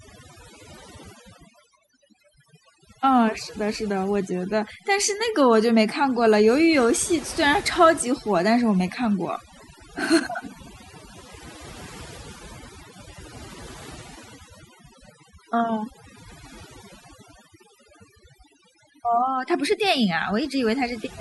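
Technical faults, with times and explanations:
Throughout, overdone noise removal: a noise reduction stage was set far too aggressively, cutting individual frequency bands hard whenever they sit near its noise estimate, so quiet parts of the speech are removed too, leaving near-silent gaps with twinkling specks.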